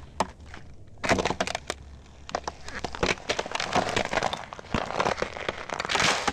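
Nothing goes wrong in this recording of everyday sounds, so there's no technical fault to point to anywhere along the way.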